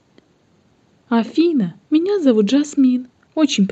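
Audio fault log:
Nothing stood out on listening to this speech recording.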